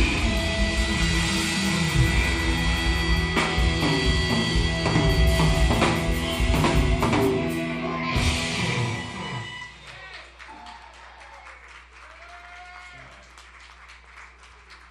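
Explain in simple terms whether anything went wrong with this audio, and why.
Nothing went wrong here: no audible faults anywhere in the recording.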